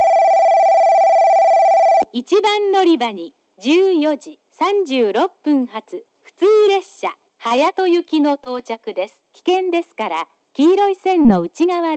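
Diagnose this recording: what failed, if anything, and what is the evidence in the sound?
The network and jitter-buffer stage of this Opus call path, whose audio is band-limited to 8 kHz, shows a short stall from a late packet at 7.47 to 7.52 s. The sound is held about 30 ms too long, then resumes exactly where it left off, adding 30 ms of delay. Nothing is lost, which separates it from packet loss.

The same network stage also produced two short concealed packet losses, at 8.44 to 8.47 s and 11.23 to 11.27 s. In each, 20 ms of audio never arrived in time and was replaced by 15 ms and 20 ms of extrapolated sound, heard as a brief smear or wobble. Unlike the stall, real material is skipped here rather than delayed.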